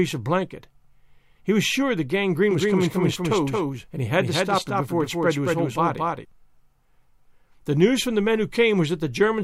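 At 2.51 s, just after "was sure the", a doubled audio track cuts in and runs to 6.25 s. A full-band copy trails by around 200 ms, a few dB quieter. It has no decay or room colour. It starts and stops abruptly. The likely cause is a slower second capture path.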